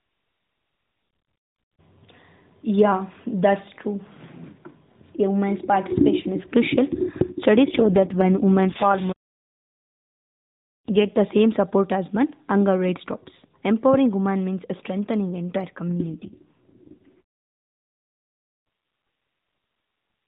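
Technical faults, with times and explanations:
7.66–11.18 s and 15.88–17.21 s, AMR rate drop: the speech turns rougher, buzzier and more synthetic, then recovers. The first stretch clears just before "same support as men". The second starts right after "women means strengthening entire". The narrow band stays the same and nothing drops out. The sound fits the AMR narrowband codec stepping down from its 12.2 kbps mode to 4.75 kbps. Fewer bits describe each 20 ms frame, so the modelled voice loses detail.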